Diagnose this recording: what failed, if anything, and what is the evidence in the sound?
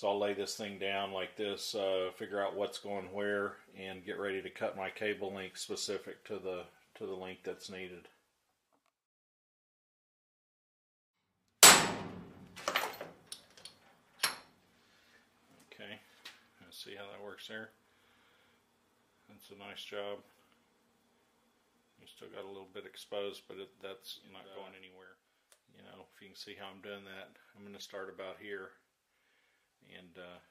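The codec stage failed: compressed frames skipped. One frame of the encoded stream was either missing from the file or rejected by the decoder as corrupt, so playback jumped straight past it. At 27.80 s the audio lurches forward by roughly 20 ms, which fits a single 23.2 ms frame.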